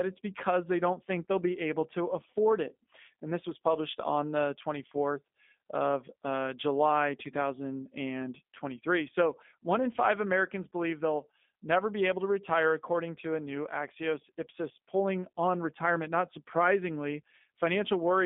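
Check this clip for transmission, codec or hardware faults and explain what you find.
One codec fault runs through the whole speech clip. G.729 codec, throughout: the speech is rebuilt rather than carried directly. Each 10 ms frame is modelled as a vocal tract filter, a pitch predictor and a few excitation pulses, which fits the 8 kbit/s G.729A variant. Nothing survives above 3.7 kHz, and the line band spans roughly 200 Hz to 3.6 kHz. The result is thin, plainly rough, slightly synthetic speech with clipped sibilants.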